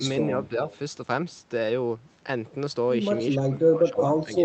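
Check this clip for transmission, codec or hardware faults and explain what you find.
The speech has two kinds of fault: a brief echo leak and two spots where speech is suppressed during double talk. The audio is band-limited to about 8 kHz.

From 0.69 to 0.78 s, a faint echo leak appears. A delayed copy of the speech returns about 310 ms late, well below the main level. The likely cause is a loudspeaker echo slipping past the canceller.

From 3.37 to 3.55 s and from 3.76 to 3.99 s, there is speech suppressed in double talk. The speech dips by around 20 dB and then around 15 dB. The canceller likely mistook both talkers for echo.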